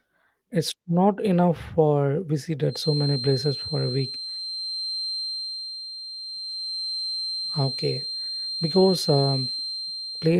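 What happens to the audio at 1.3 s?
Nothing goes wrong at 1.3 s: the speech passes through intact, carried by Opus voice compression in its hybrid mode at 24 kbps, whose light coding leaves no audible break or distortion at that point.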